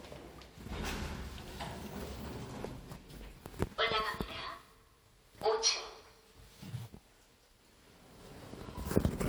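Listening to these everyday sounds, nothing stood out as a technical fault at any point.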